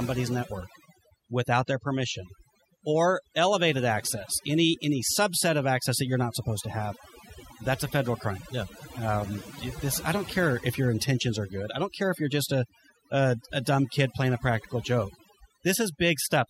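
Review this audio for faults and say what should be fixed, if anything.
Overdone noise removal runs throughout the speech. The noise reduction was set so aggressively that frequency bands near its noise estimate are pulled far down or cut. The background drops and breaks up into twinkling specks, and quieter parts of the voice vanish. To prevent it, apply gentler noise reduction, using less attenuation and a more accurate noise profile, and accept a little remaining background noise rather than stripping away parts of the voice.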